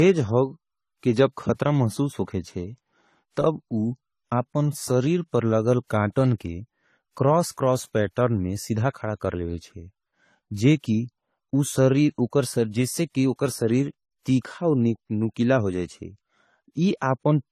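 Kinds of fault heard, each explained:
Transcoding between lossy codecs: the speech carries several kinds of compression artefact at once, with smeared, swirly detail over a coarse, watery treble and nothing above 14 kHz throughout. This is likely a chain of low-bitrate codecs, fitting WMA, then MP3, then AAC-LC.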